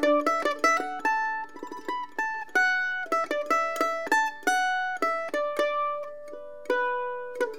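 From 1.41 to 7.47 s, faint clock slip clicks recur roughly every 1.5 s, likely single-sample slips between unsynced clocks, each a thin vertical spectrogram line.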